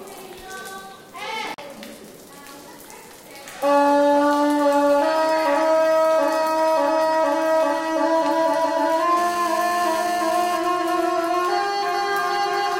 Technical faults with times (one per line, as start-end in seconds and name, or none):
1.54-1.59 Bluetooth stall
9.17-10.58 GSM phone buzz
10.64-12.58 GSM signalling bursts